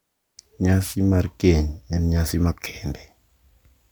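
A wireless microphone noise hit occurs from 0.80 to 0.96 s, just before "mar keny en nyasi". For about 0.16 s the radio link from an analogue FM microphone dips into a fade, as reflected copies of the signal cancel the direct one at the receiver. With the carrier weakened, receiver noise surges up and breaks into a brief swish of static before the signal recovers.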